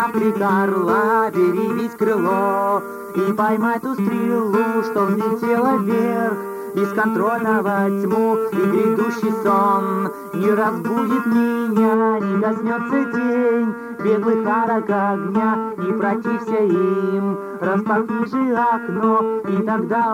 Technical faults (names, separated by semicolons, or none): pre-emphasis left on